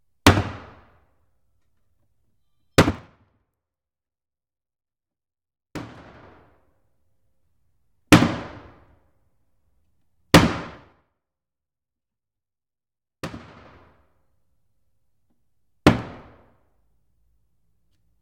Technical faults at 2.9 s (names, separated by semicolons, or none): zipper noise